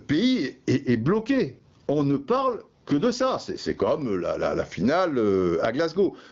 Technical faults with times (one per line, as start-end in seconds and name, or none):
0.00-6.31 gain pumping
0.87-4.02 AMR rate drop
5.93-6.31 AMR rate drop